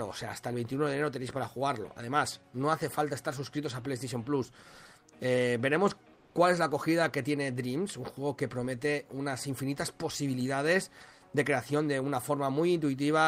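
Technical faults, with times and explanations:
6.13–6.35 s, comfort noise in place of the background: for about 220 ms the real background, about 33 dB under the loud parts, turns into flat, featureless hiss about 2 dB quieter. This is likely Opus-style discontinuous transmission, with the receiver filling the gap with synthetic noise.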